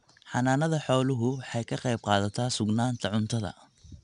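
From start to finish the speech has passed through 4-bit ADPCM compression. Each sample is stored only as a coarse 4-bit step away from a predicted value, with the step size adapting as the signal changes, and the resulting error is clearly audible. It comes through as a gritty hiss that rises and falls with the loudness of the speech. Nothing remains above 10.7 kHz, which points to a data rate of roughly 89 kbps.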